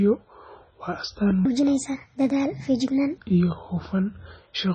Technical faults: MP3 compression; section at the wrong speed

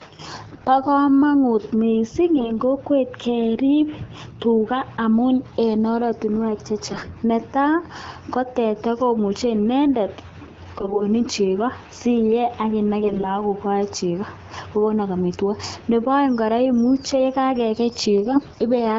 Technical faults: AMR bit errors

